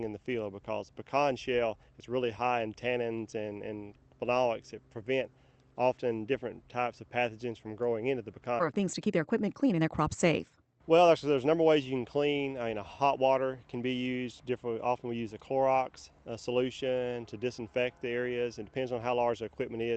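The audio passed through a call codec, and its top end stops near 8 kHz, which fits a wideband Opus link at around 32 kbps. At about 8.6 s there is a skip ahead. Playback jumps forward with no gap at all. About a second and a half of audio is simply missing. The two sides of the cut are butted together. This points to a stretch being dropped while later audio already waited in the buffer. Right after, from 8.71 s to 11.56 s, there is a jitter buffer speed-up. The sound runs at 131% speed but keeps its pitch. It sounds hurried. The receiver was trimming short pitch-period pieces again and again, removing roughly a second in total. That brought a swollen buffer back down to its target delay.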